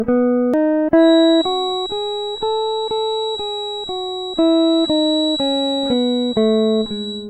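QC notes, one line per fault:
0.54 s, damaged data in a compressed stream: a single short glitch cuts into the music. Some of the compressed data at this point was corrupted, so the decoder could not read the frame correctly, lost its place in the stream and skipped ahead to the next valid frame header. The misdecoded fragment and the skip together produce the blip.
0.94 s to end, feedback whistle: a thin, steady tone near 3.9 kHz enters and stays behind the music for the rest of the clip. It sits about 10 dB below the music, swelling and fading slowly in level but never building up. The likely cause is a loudspeaker-to-microphone loop held just at the edge of feedback, so one high frequency keeps ringing without running away.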